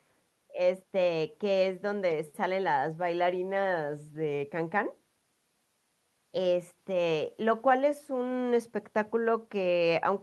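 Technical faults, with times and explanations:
No technical faults can be heard anywhere in this speech recording, and the signal comes across as continuous and stable from its opening moment to its final one.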